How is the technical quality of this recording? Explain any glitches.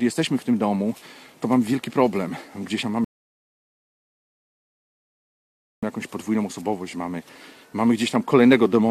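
One glitch stands out: a rebuffering stall from 3.04 to 5.83 s. The player drained its stock of downloaded audio and halted until more data came in. That drops the sound to silence for about 2.8 s, then it picks up exactly where it stopped. Nothing is lost, but the pause adds that time.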